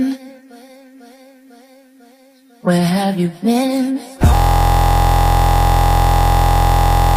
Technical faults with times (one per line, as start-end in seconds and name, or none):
4.35-7.16 system hang loop